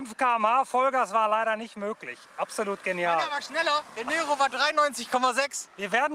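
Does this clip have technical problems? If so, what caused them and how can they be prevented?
No, there are no technical problems to report in this clip. Nothing in it calls for a cause to trace or a fix to apply.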